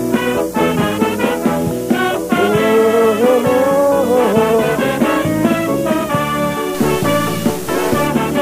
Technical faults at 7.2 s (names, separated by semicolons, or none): stuck bit